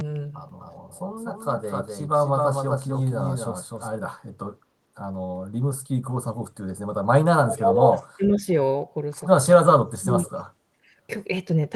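A doubled audio track runs from 0.6 to 3.88 s in this speech recording: a second full-band copy trails the original by roughly 300 ms at about 5 dB lower. It has no reverberant tail or room colour of its own, and it begins and ends abruptly, most likely because a slower capture path or an out-of-step edit left two copies of the same audio mixed together. Echo leak appears as faint delayed scraps at 1.61 to 1.65 s and 1.82 to 1.89 s, about 35 dB under the speech, and again at 10.26 to 10.43 s, louder at about 25 dB down. Each arrives 413 ms late, a constant offset that points to one far end's loudspeaker being picked up by its microphone and only partly cancelled before being sent back. Speech suppressed in double talk takes the voice down in short bursts at 7.46 to 7.98 s (about 15 dB at its deepest), 8.17 to 8.47 s (about 10 dB) and 9.98 to 10.24 s (about 25 dB), each lasting a few hundred milliseconds. 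These dips are likely the echo canceller failing to tell the local talker apart from loudspeaker echo while both sides spoke at once, so it attenuated everything.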